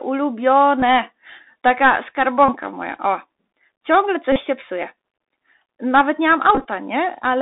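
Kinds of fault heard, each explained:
Bluetooth CVSD headset codec: one-bit delta coding at 64 kbps confines the speech to roughly 250 Hz–3.7 kHz, with plainly audible scratchy sibilants, slope distortion and granular hiss throughout.
Bluetooth headset packet repeated: lost headset packets are replaced by re-decoding the previous one, giving brief buzzy stutters near 267 Hz, longest just after "nie mam" around 6.55–6.65 s.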